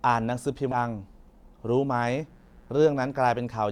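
At 0.71 to 0.76 s, compressed frames are skipped: about 400 ms of speech vanishes, consistent with 20 ms frames, so the audio jumps ahead. From 1.94 to 3.44 s, mains buzz at 60 Hz, about 35 dB below the speech, rasps steadily, shown on a spectrogram as evenly spaced horizontal harmonic lines reaching several kHz.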